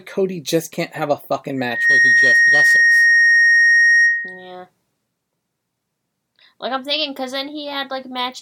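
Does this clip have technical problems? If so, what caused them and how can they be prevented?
Yes. From 1.57 to 4.53 s a loudspeaker feedback squeal swells within a fraction of a second into a 1.9 kHz tone, roughly ten decibels above the speech, showing as one bright horizontal spectrogram line. Lowering loudspeaker gain, moving the microphone away from the speaker, or notching 1.9 kHz would prevent it.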